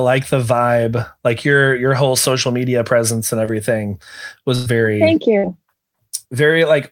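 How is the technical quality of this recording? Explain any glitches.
The speech has three network glitches. At 3.45 to 3.49 s, just after "social media presence and", a short concealed packet loss dropped about 20 ms, which the receiver patched by extending the preceding sound, leaving a brief smear. A burst of packet loss at 4.55 to 4.68 s and again at 5.38 to 5.45 s lost about 100 ms and 60 ms of audio. Concealment stretched the last sound and faded it out, so each gap becomes a held buzz or fading hiss before the speech resumes with that stretch missing.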